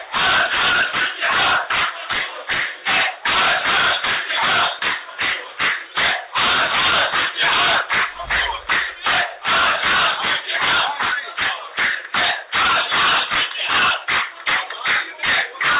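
No technical faults can be heard in this clip. It comes through a call path whose sound stops at about 4 kHz, with the mild coding grain of narrowband telephone audio, which fits G.711 mu-law at 64 kbps.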